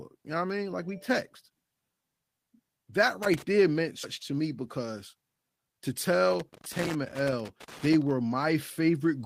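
Irregular scratchy crackling breaks into the speech from 3.23 to 3.42 s, just before "there meant", and again for a longer stretch from 6.31 to 8.11 s. This is loose connector crackle: a worn or dirty contact making and breaking as it moves, chopping the signal and adding pops. At 4.03 s, right after "there meant", the talk jumps forward with no gap. This skip ahead drops roughly 400 ms of speech, joining the two sides directly, likely because the jitter buffer discarded audio that was already queued. From 4.31 to 5.80 s the speech sounds hurried but keeps its pitch, running at 111% speed. This is jitter buffer speed-up: the receiver trims short pitch-period pieces, about 150 ms in total, to shrink an overfull buffer.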